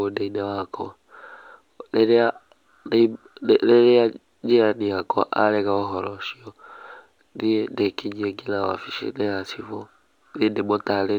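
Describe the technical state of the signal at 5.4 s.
At 5.4 s, as throughout, a faint metallic shimmer rides on sibilants above a dulled top end: imaging from linear upsampling, leaving mirror images roughly 45 dB down between 12 and 24 kHz, consistent with a 24 kHz original.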